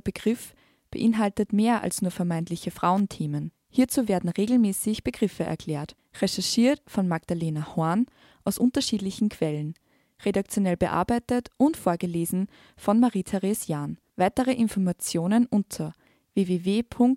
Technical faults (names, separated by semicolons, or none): electrical switching spike